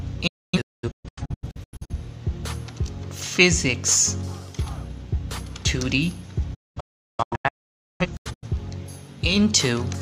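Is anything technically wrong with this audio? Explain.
Yes. There is a digital broadcast dropout from 0.27 to 1.93 s and again from 6.54 to 8.47 s. The receiver mutes when frames fail to decode. The sound drops out in short holes with 8 ms fades, losing about 1.0 s (longest gap 256 ms) and then about 1.45 s (longest gap 512 ms).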